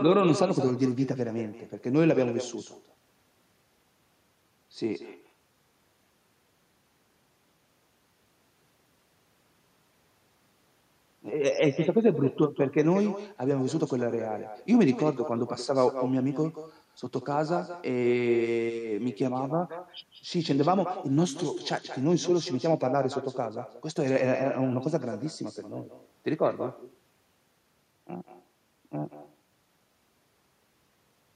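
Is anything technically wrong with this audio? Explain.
Yes. Echo with no canceller runs throughout the speech. The far end plays the call through a loudspeaker, its microphone picks it up, and nothing cancels it, so every phrase returns roughly a fifth of a second later as a thinner copy about 11 dB quieter.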